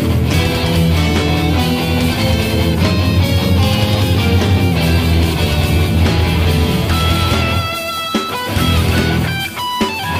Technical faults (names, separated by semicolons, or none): drift correction step